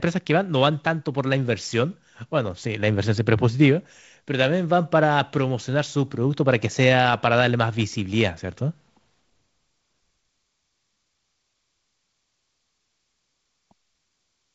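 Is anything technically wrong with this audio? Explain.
No, nothing is technically wrong with this speech. It carries the sound of G.722 wideband telephone coding at 48 kbit/s, with nothing above 7.7 kHz and a light grain from the coding, including a slightly noisier lower band.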